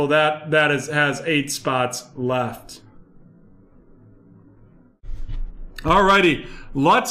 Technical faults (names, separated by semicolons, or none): none